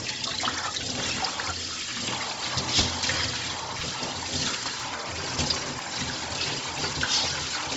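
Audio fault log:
Throughout: Bluetooth LC3 compression. The sound is heavily coded, with a breathy, grainy edge and nothing above 7.7 kHz. The upper band is not carried and is replaced by synthetic noise. The short transform frames, which fit a 7.5 ms frame size, and the tight bit budget, consistent with around 24 kbps, point to this being likely an LC3 link at a low bitrate rather than a clean capture.
0.83, 1.82, 2.81, 3.81, 4.80, 5.79, 6.79 s: audio missing between chunks. At each of these points a few milliseconds of sound drop out and the two sides butt together with no gap, giving a brief skip or tick. The skips recur about once per second, which likely reflects a recorder or processor handling 1 s blocks and losing a sliver at each handover.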